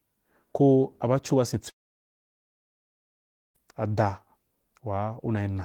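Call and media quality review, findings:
Long network dropout, 1.69 to 3.57 s. Speech cuts out, short fading buzz from concealment, then 1.82 s of near silence. Likely packet loss in the network; jitter buffer ran dry, 1.86 s of speech never arrives, resumes after the gap.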